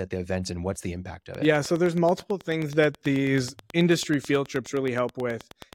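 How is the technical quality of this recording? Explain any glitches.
The recording is marred by a train of clicks from 1.35 s to 5.74 s: about forty regular ticks at 9.4 per second, peaking well above the speech, likely from electrical interference or a faulty connection. They appear as evenly spaced waveform spikes and thin vertical spectrogram lines.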